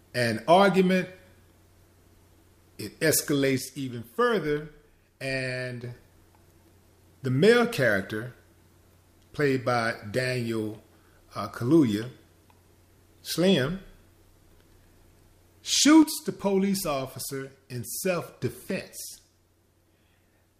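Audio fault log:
3.58–5.84 s, 16.02–18.42 s and 18.71 s to the end: one channel drops out. The level falls abruptly by about 6 dB and recovers after the first two, likely because one stereo channel is lost and the mono sum carries only the other channel's share.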